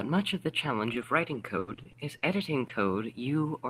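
From 0.85 s to 2.71 s the speech breaks up with repeated packet loss, giving a robotic sound. Six short holes fall across this stretch, the longest about 80 ms, each patched by stretching out the last received sound before the next loss arrives. About 12 percent of the span, around 200 ms in total, is rebuilt this way, so the speech turns choppy and robotic, with small pieces audibly missing.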